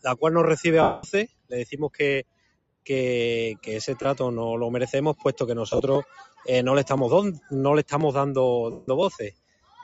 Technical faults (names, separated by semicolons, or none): noise suppressor applied to music or sounds; lost LE Audio frames; sound cut by the noise suppressor